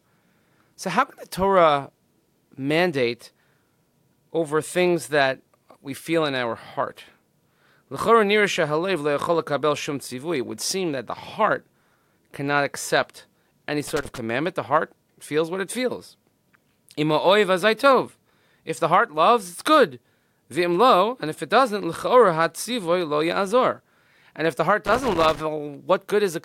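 Loose connector crackle appears from 13.88 to 14.18 s, right after "cannot accept any", and again from 24.86 to 25.40 s. A worn or dirty contact intermittently opens and closes, chopping the speech, heard as ragged bursts of scratchy crackle.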